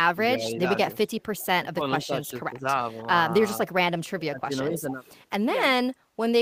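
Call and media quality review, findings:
Speech suppressed in double talk: echo canceller likely unable to separate near talker from loudspeaker echo, so attenuates both. Speech dips by about 10 to 20 dB at 0.15–0.6, 1.61–1.84, 2.01–2.66 and 4.19–4.98 s.

Echo leak: echo canceller likely missing part of the loudspeaker pickup, so the residual is returned. Faint delayed copy 445 ms behind the speech, about 30 dB down at 1.22–1.46 s and about 25 dB down at 4.91–5.21 s.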